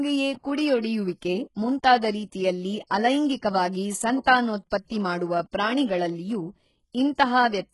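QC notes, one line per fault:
Throughout, HE-AAC compression: the top end sounds rebuilt rather than captured, with s sounds gritty and lispy, a metallic sheen over the treble, and nothing at all above 11.5 kHz. That's likely the codec coding only the lower band and faking the highs by copying lower bands upward under a coarse envelope, so harmonics don't line up across the join. Damage this heavy fits a very low bitrate, around 12 kbps.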